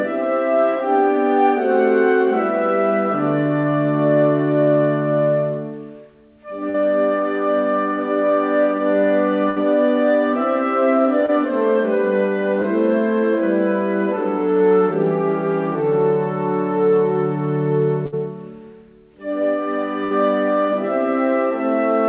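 Short concealed packet loss hits at 6.7, 11.26 and 12.62 s: 20 to 40 ms went missing, and the decoder stretched the preceding sound into a quick smear or wobble. At 9.5, 18.06 and 20.04 s there are bursts of packet loss. About 60 ms vanishes each time, covered by a fading held buzz or hiss, and then the audio jumps ahead. Everything also sits under a 4 kHz ceiling from the G.711 A-law call path.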